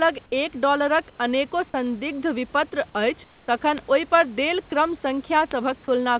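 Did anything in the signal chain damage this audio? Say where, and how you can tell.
Yes. The first fault is at the digital link into the converter. The receiving device runs on its own clock rather than locking to the sender's word clock, with a mismatch of around 150 ppm. From 0.13 s to the end, the two clocks slip past each other about five times a second, and each slip drops or repeats a single sample. The result is word clock ticks: sharp clicks of uneven strength at a steady rate, roughly every fifth of a second, running under everything.

In call processing, at 1.10 to 1.18 s (80 ms) and 3.24 to 3.48 s (240 ms), the room background, which sits about 32 to 33 dB below the loud parts, gives way to a smooth, featureless hiss. The hiss is about 1 dB quieter in the first gap and about 3 dB quieter in the second. This is likely comfort noise in place of the background: the sender's voice detector stopped transmission during the pauses, and the receiver filled them with synthetic noise shaped roughly like the room.

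The same call-processing stage causes a third fault at 4.70 s. For 20 ms, the audio itself vanishes and is replaced by that same steady noise before returning. The likely cause is sound dropped by the voice detector: it misjudged a quiet stretch of the signal as background and cut transmission briefly, so the receiver inserted comfort noise over real content. Across the clip, the G.711 call path's band ends at 4 kHz.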